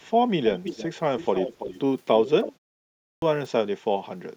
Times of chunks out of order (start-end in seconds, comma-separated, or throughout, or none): none